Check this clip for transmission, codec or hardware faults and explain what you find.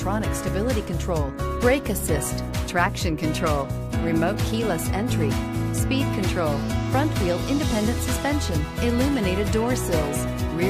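Nothing stood out on listening; the audio carried no audible transmission, codec or hardware problem.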